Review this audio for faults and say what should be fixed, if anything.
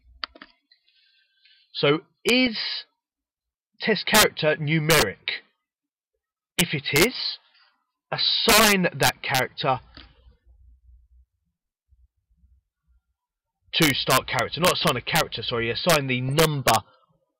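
Integer overflow runs through the whole clip. The level is driven about 6 dB past full scale, and the few peaks that cross it, only a small fraction of samples, wrap to the opposite sign instead of being held. That's why loud moments crack far more harshly than clipping would. The fix is to use saturating arithmetic or a limiter before the integer conversion.

There are also corrupt frames decoded as if they were valid. You'll hear one at 2.47 s, then others at 5.00–5.07 s, 14.80–14.85 s and 16.29–16.33 s. Each one spans a handful of frames, and the 5 s one is the loudest, peaking around -5 dBFS. Damaged bits sent energy to the wrong frequencies. To prevent this, checksum each frame and conceal failures rather than playing them.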